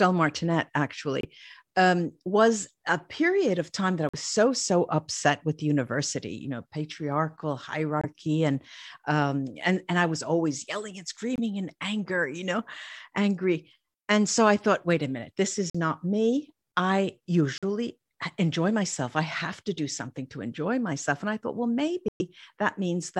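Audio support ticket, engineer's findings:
Corrupt frame muted: abrupt silent holes in speech at 1.21, 4.09, 8.01, 11.36, 15.70, 17.58 and 22.08 s (longest 0.14 s), decoder rejecting bit-flipped frames, player substituting silence, timing preserved.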